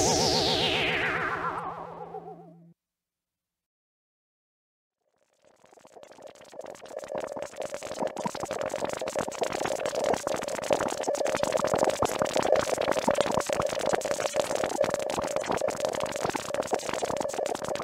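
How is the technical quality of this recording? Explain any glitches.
One glitch stands out, near the end of the recording. At 17.26 to 17.30 s there is damaged data in a compressed stream: corrupted bytes leave the decoder misreading frames and losing sync until it finds the next valid frame header, producing a short glitch of about 44 ms.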